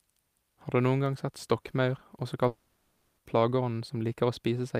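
A speech clip in which, just after "gang sett stokkmaur også", the sound from 2.47 s to 3.19 s is replaced by a smeared continuation of the last moment, turning into a buzzy hiss that fades and never drops to full silence. When the speech resumes, about 0.7 s of it is simply gone. This is most likely a long network dropout: the receiver got no audio for that stretch and padded the hole by extending what it last had.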